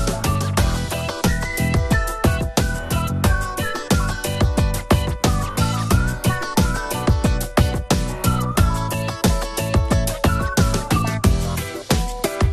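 MP2 compression is heard throughout: the sound is dull and carries a plainly audible gurgling, granular texture. This is likely caused by MPEG Layer II coding at a rate pointing to around 80 kbps, too few bits to keep upper sub-bands running, so they flicker and the remaining bands are coarsely quantised.

DAB burbling is heard at 8.34 s as a few watery blips. A small fraction of bit errors slipped past error correction into the MP2 data, corrupting samples so single sub-bands gave short blips of noise across two frames.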